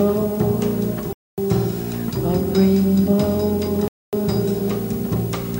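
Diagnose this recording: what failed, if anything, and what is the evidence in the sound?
The audio was split into 2.5-second chunks during transfer, storage or playback, and each join was rejoined with silence inserted rather than butted together. This is a gap between chunks: either codec padding at each chunk boundary or a player starting each new chunk late would leave this hole. The sound drops out from 1.13 to 1.38 s and again from 3.88 to 4.13 s, each hole 250 ms long and recurring every 2.75 s. Nothing is lost, but the sound stops and resumes at each join.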